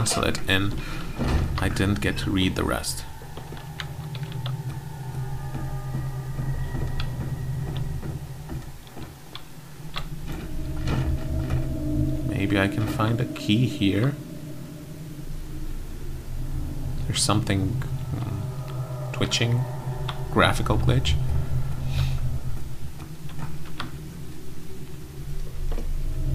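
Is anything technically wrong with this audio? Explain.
No, nothing technically wrong stands out here; it all sounds just as it should.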